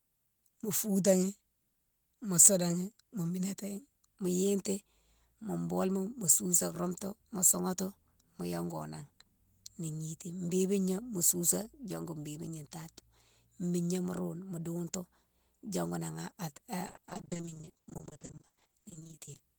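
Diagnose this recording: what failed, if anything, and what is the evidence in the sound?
Network stage: repeated packet loss (robotic sound) from 16.87 to 19.41 s; dozens of gaps up to 40 ms, each patched by extending the previous sound, leave nearly half the stretch choppy.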